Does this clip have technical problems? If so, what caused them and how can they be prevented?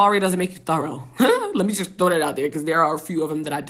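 No, this clip has no technical problems, so there is nothing to prevent.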